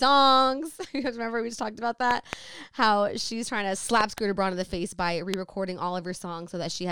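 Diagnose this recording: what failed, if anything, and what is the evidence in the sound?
Likely a voltage step in the analogue wiring or a switch adds loud pops, far above the speech: double pops at 2.11–2.35 s after "we just talked about" and 4.01–4.20 s after "she's trying to", and a single pop at 5.34 s after "the face by re", with speech continuing underneath.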